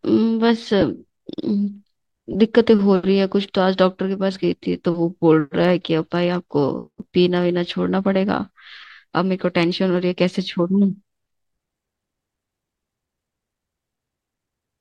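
Lost LE Audio frames at 0.81 s and from 2.33 to 2.35 s: about 10 ms, then 20 ms, of the speech went missing, and the LC3 decoder filled each gap by repeating the last spectrum with randomised phase, giving brief noisy smears.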